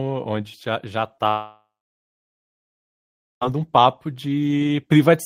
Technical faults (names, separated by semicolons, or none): short concealed packet loss; long network dropout